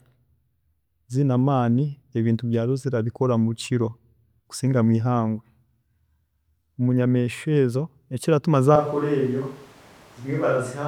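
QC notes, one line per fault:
8.76–10.88 s, switch to a distant microphone: right after "munyamiishwa ezo ekiratuma" the close microphone's feed likely drops out and a farther pickup carries the speech to the end. The sound turns abruptly roomy, hollow and bass-light, about 5 dB quieter, with room noise roughly 25 dB below it.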